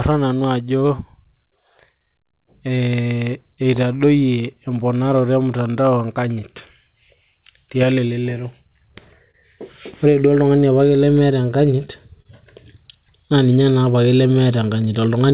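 Speech, carried over a call path with narrowband coding that leaves nothing above 4 kHz, has clock drift between sender and receiver throughout. The sender's clock runs about 3% slow, so the receiver's jitter buffer keeps draining and must be topped up again and again. Repeated timing corrections run from 0.1 s to 15.33 s, with the receiver stretching short pieces so the audio plays at about 98% speed and gains roughly 0.4 s overall. The edits are small and unevenly spaced, all lengthening. Scattered short gaps fall between 2.46 s and 3.76 s, where about three packets arrived late. Each hole, around 10 ms at most, was patched by continuing the last sound, with nothing lost, so only brief ticks or smears occur. A short stall from a late packet occurs at 9.31 s to 9.35 s, and another at 12.22 s to 12.26 s. In each, the buffer ran empty and the last sound was held for 26 ms and 29 ms respectively before playback resumed where it left off.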